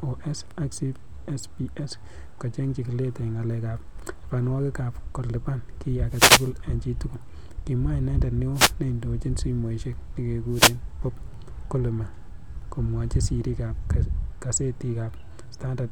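Wireless microphone noise hits interrupt this speech clip at 6.08 to 6.52 s after "ak ko lipan ki", at 8.53 to 8.73 s between "inendet neo" and "neindochin simoisiek", and at 10.49 to 10.78 s. Each is a brief burst of static where the FM radio link fades and receiver noise rises.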